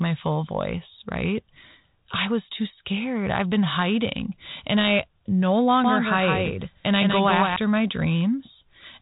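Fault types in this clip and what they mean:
Doubled audio track: from 5.84 to 7.56 s the speech is heard twice, a flat, full-band copy roughly 150 ms behind and a few dB quieter, with no room colour, cutting in and out abruptly; likely a second capture path or an out-of-step edit layering two copies.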